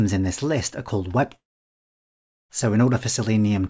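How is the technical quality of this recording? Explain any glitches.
The recording has one clear glitch, a break of just over a second in the middle. The audio runs through a G.722 call path, so nothing is heard above 8 kHz.

From 1.36 s to 2.51 s the sound trails off into a brief fading buzz or hiss and then about 1.1 s of near silence before resuming, with the missing stretch simply gone. This is likely a long network dropout: packets stopped arriving, the receiver briefly extended the last sound to cover the gap, then gave up and played silence until data returned.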